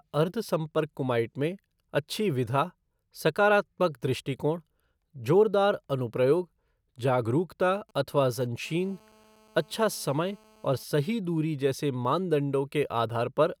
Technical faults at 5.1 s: none

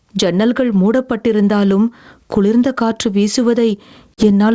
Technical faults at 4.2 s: gain pumping; packet loss on an ADPCM call

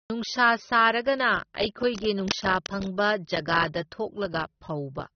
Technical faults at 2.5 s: low-bitrate audio saved at a high bitrate; cable scratch noise

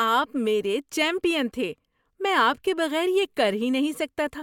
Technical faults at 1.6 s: none

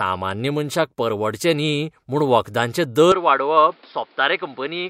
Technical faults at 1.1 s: none

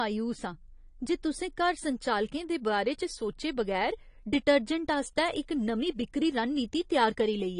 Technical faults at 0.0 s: AAC compression

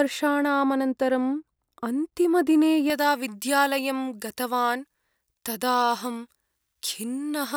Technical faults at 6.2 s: pre-emphasis left on

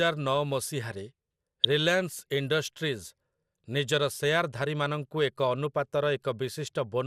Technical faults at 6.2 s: MP2 compression

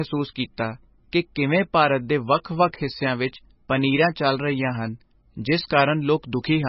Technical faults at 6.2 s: MP3 compression; pre-emphasis left on

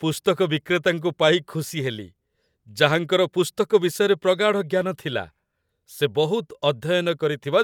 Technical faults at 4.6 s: none

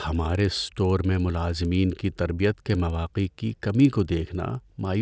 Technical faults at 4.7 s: resampler restarted on every block

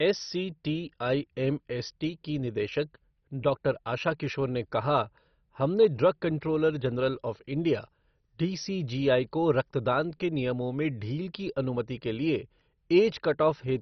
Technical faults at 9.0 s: MP2 compression; switching supply whistle

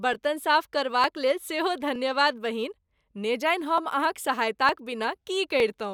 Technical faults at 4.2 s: clock drift buffer slips

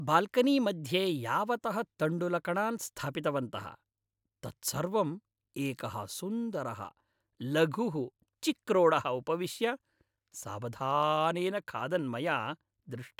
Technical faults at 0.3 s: none

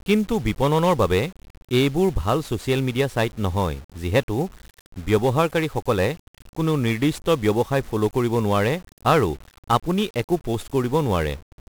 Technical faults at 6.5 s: 1-bit DFPWM compression

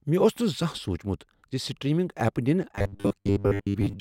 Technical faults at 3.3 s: robotic sound from repeated short buffers

